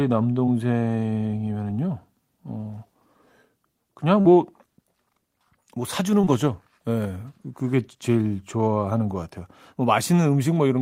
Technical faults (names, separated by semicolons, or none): short concealed packet loss